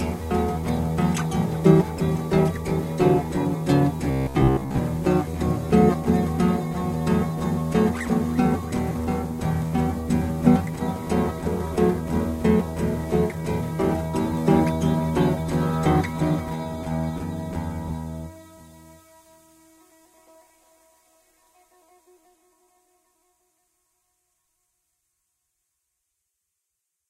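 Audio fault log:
4.11–4.82 s, robotic sound from repeated short buffers: the sound turns into a rigid, metallic buzz at 66.8 Hz for most of this span, likely caused by a short chunk of about 15 ms being replayed while incoming audio was skipped.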